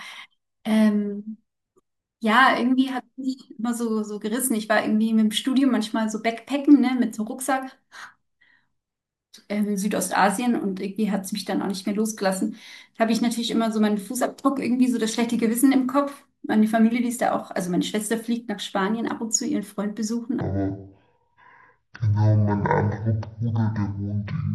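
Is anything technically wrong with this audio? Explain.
Yes, there's one problem. From 20.41 s to the end, a section at the wrong speed: the speech runs at half speed, dropping roughly ten semitones, deep and dragging, likely from playback against the wrong clock.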